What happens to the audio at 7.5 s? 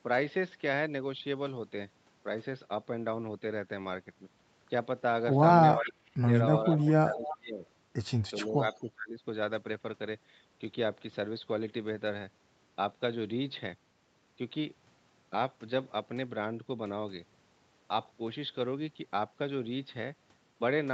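Speech suppressed in double talk, from 7.02 to 7.64 s: the speech drops by roughly 20 dB at its deepest, thinning and breaking up in pieces. The likely cause is an echo canceller mistaking overlapping talk for loudspeaker echo and attenuating both.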